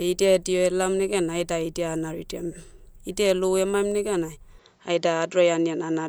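At 4.59 s the sound abruptly narrows and stays that way to the end. Nothing reaches above 7.6 kHz, and the tone shifts while loudness stays roughly the same, with no gap at the change. A faint new background noise, well below the speech, arrives with it. This is most likely the input switched to a poorer device. A new noise floor and timbre set it apart from a simple bandwidth cut or filter on the same microphone.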